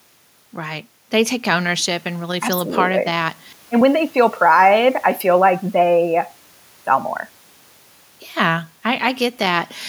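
Nothing technical goes wrong in this speech recording, and the faint room noise sitting about 36 dB below the speech is just the space the microphone was in.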